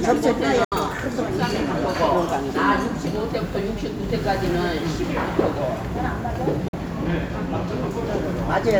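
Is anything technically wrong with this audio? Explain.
Yes. Bluetooth dropouts occur at 0.64–0.72 s and 6.68–6.74 s. Packets likely missed their delivery deadline to the headphones, leaving silent gaps of about 70 ms and 46 ms, which fits two or three lost packets each. The audio then resumes further along, as though it had kept playing.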